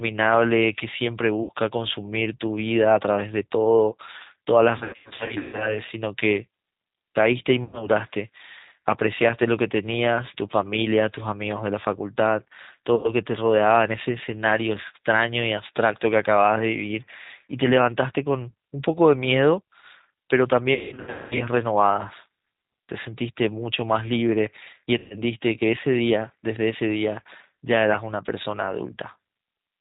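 Throughout, the speech sounds narrow, with nothing above 4 kHz, and slightly rough and synthetic, with plainly audible damage. This is the G.729 codec (the G.729A variant at 8 kbit/s), which discards the waveform itself and rebuilds each 10 ms frame from a vocal tract filter, a pitch predictor and a handful of pulses, so only the broad shape of the speech survives.

On top of that, the sound repeatedly smears into a buzzy, stretched tone that fades, and the speech stays weak and distorted for a moment afterwards. This is VoIP packet loss concealed by the speech codec. It happens at 1.43 to 1.51 s (60 ms missing), 7.64 to 7.89 s (90 ms), 12.95 to 13.13 s (90 ms) and 24.98 to 25.20 s (120 ms). Two longer bursts run from 4.78 to 5.80 s, with 510 ms lost in gaps scattered over 810 ms and the longest gap 150 ms, and from 20.74 to 21.49 s, with 510 ms lost over 660 ms and the longest gap 210 ms. 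The gap sizes fit 30 ms packets. During each gap the decoder keeps replaying its last pitch and filter at falling gain. Because every frame builds on the previous one, recovery lags after packets resume.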